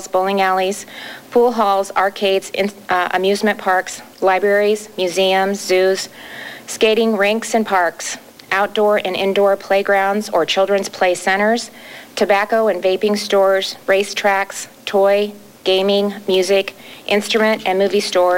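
From start to finish the sound carries a grainy, gritty distortion that tracks the signal, with quiet passages sputtering or dropping out, likely low bit depth without dither, consistent with rounding to about 7 bits. The error sits roughly 30 dB down. Waveforms show visible stair-steps; spectrograms show signal-correlated hash.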